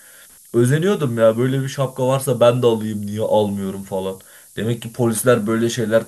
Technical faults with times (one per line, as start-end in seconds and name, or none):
0.00-6.08 low bit depth with noise shaping